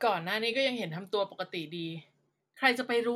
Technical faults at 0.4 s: none

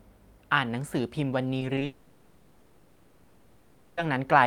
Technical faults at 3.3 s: long network dropout

